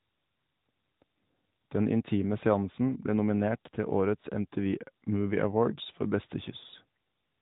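No faults are present; the speech carries the band-limited character of the AMR narrowband mobile codec at 12.2 kbps, with nothing above 4 kHz and only light codec coloration.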